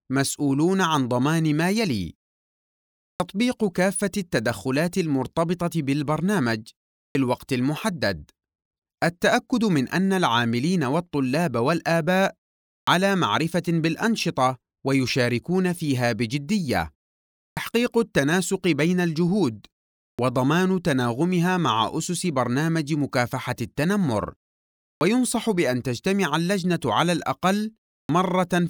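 Clipped start after a pause at 3.15, 7.1, 12.83, 17.52, 20.14, 24.96 and 28.04 s: after each gap of 0.34 to 1.04 s, the output is still waking, so 44 to 52 ms of onset vanishes. Words jump in abruptly, and waveform and spectrogram show hard vertical edges.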